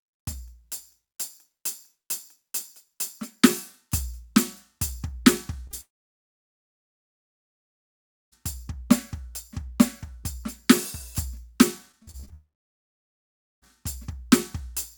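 At 5.67 s and again at 5.71 s, two back-to-back instances of short concealed packet loss each remove about 20 ms of the music. The decoder patches each hole by extending the preceding sound, so the passage smears briefly with a wobble rather than clicking. On a spectrogram the harmonics freeze into flat horizontal strokes for a few hundredths of a second. The waveform keeps its level but loses its fine detail across the join.

From 5.81 s to 8.34 s the music cuts out in what is likely a long network dropout, with about 2.5 s never played. A decaying tail continues the last sound for a moment, then nothing remains until the music returns further along, with the missing stretch simply gone. On the waveform this is a near-flat line, and the spectrogram shows an almost empty block after a short fading smear.

Between 11.92 s and 12.32 s, repeated packet loss produces a choppy sound with pieces missing. 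Six gaps, the longest 41 ms, are filled in turn, so roughly a third of that stretch is concealed audio rather than real music. The spectrogram shows a striped pattern of frozen, repeated slices, and the waveform breaks into uneven chunks.

A second likely network dropout follows almost immediately, from 12.34 s to 13.64 s, leaving about 1.2 s of near-silence before the sound returns. It appears as another flat, nearly empty region on both displays.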